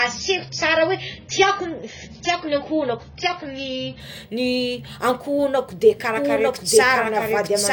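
The player began the adaptive stream on a low-bitrate version before stepping up to a better one at 4.0 s. From 0 to 4.0 s the speech has nothing above 7 kHz, which fits a starting rate around 16 kbit/s, and codec artefacts are heavier. The quality then jumps up suddenly with no gap.

From 6.15 s to the end, a doubled audio track appears. A second copy, likely from a slower capture path, trails the original by about a second at roughly the same level. It is full-band with no decay or room colour, and it starts abruptly.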